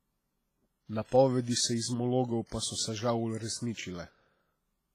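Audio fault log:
throughout, WMA compression: the speech sounds ringing and washy, with hiss that swells and fades with the signal and nothing above 15.6 kHz, likely from heavy WMA encoding, which fits a bitrate near 24 kbps. A spectrogram shows smeared, blocky energy with holes where weak components vanish.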